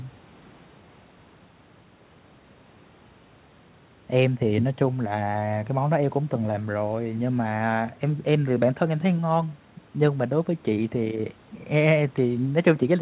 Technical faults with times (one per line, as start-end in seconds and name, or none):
none